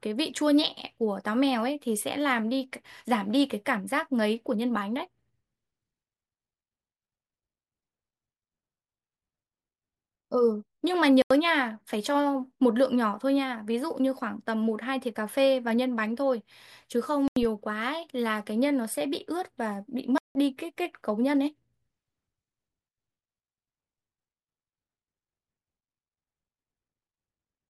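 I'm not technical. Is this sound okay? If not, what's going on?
No. The problem is corrupt frame muted. The audio was stored in small compressed chunks, and some of those chunks got damaged. The player couldn't decode them, so it played silence in their place. You hear sudden gaps in the speech: a short one at 11.22 s lasting under a tenth of a second, then two longer ones, each about 0.17 s, at 17.28 s and 20.18 s. The rest of the timing stays in step.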